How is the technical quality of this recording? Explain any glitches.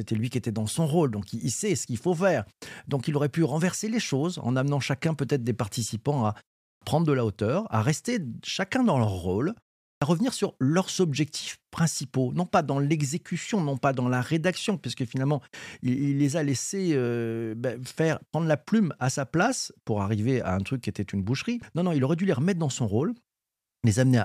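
Two glitches, both clipped starts after a pause. At 6.73 s, following a pause of about 0.33 s after "des participants à", the onset of "prendre de la hauteur" loses roughly 86 ms. At 9.94 s, after a 0.4 s pause following "chacun dans leur rôle", about 76 ms vanishes before "à revenir sur leurs". The output path sleeps during silence and is slow to resume, so the first sounds are cut and speech jumps in abruptly.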